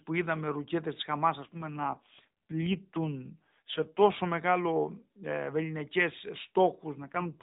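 Speech carried over an AMR narrowband mobile codec, with nothing above 4 kHz. Two AMR rate drops occur, from 1.40 to 4.05 s, just before "μεγάλο ε", and from 7.02 s to the end. The voice turns buzzier and more synthetic with no gap. This fits the codec stepping down from 12.2 to 5.9 kbps on a weak link.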